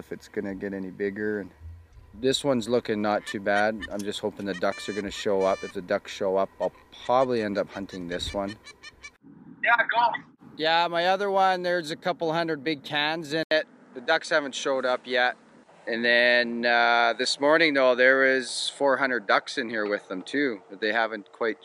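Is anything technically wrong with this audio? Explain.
Yes. At 13.43 s the sound drops out for about 80 ms, then continues to the end with nothing above 10.5 kHz, duller and more closed-in, over a faint new background noise, at about the same loudness. This is likely an input switched to a poorer device, a narrower-band microphone or headset profile taking over mid-recording. The brief gap and the changed noise floor set it apart from a simple filter or bitrate drop on the same input.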